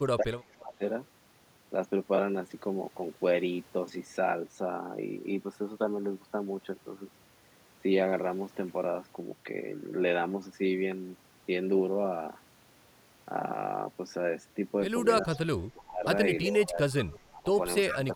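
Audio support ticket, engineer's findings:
Speech suppressed in double talk, 0.01–0.83 s, 15.23–16.05 s, 16.47–17.48 s, 17.89–18.13 s. Speech dips and breaks up while far end is active: deepest about 30 dB in first two spans, about 25 dB in third, about 15 dB in last. Roughly half a second lost in each of the first two, 0.7 s in third, brief in last. Likely loudspeaker-side echo canceller misjudging double talk and attenuating its own talker's speech with the echo.

Echo leak, 15.23–15.37 s, 17.01–17.41 s, 17.89–17.98 s. Delayed copy of speech, lagging 363 ms; about 25 dB below speech, then about 20 dB, then about 10 dB, rising each time. Likely residual echo from a loudspeaker endpoint whose canceller left part of the mic pickup unremoved, returned to the line.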